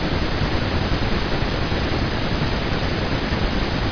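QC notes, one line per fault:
Nothing stood out on listening to the speech.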